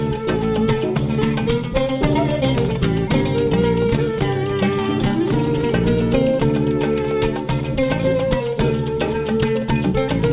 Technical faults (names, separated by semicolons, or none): none